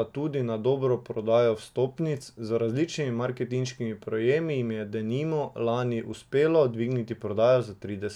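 No technical faults can be heard anywhere in the recording.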